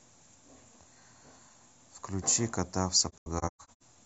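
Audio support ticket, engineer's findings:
Speech drops out in several soft-edged gaps, 3.09–3.83 s. About 430 ms silenced in total, longest gap around 150 ms. AAC frame loss with muting: the decoder zeroes the missing frames' spectrum, and window overlap fades each hole in and out.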